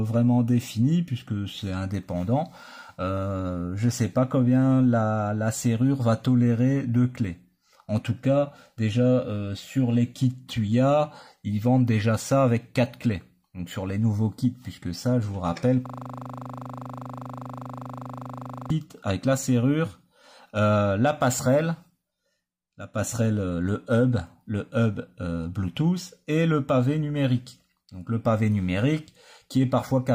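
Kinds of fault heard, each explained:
System hang loop: the host or its audio driver stalled while the playback hardware kept reading the same ring buffer, so one 40 ms slice of sound repeats exactly, back to back, about 70 times. From 15.86 to 18.70 s the audio turns into a steady buzz repeating at 25 Hz. A loop that short points to the buffer size, roughly 40 ms of audio, which fits the hardware recycling a single buffer until the system resumed.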